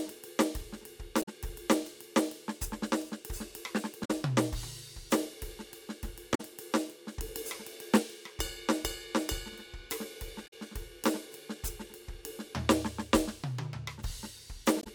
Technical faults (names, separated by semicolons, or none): damaged data in a compressed stream